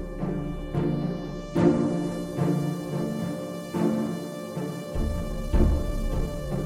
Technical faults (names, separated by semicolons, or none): time-stretched section